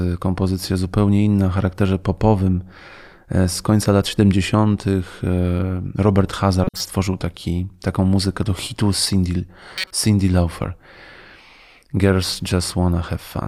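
Speech, marred by two corrupt frame decoded bursts, at 6.64–6.83 s, just before "taki taką muzykę do", and 9.76–9.91 s: damaged compressed frames were decoded anyway, so misread gains spray loud, misplaced energy, seen as bright broadband smears and spiky waveform bursts spanning several frames.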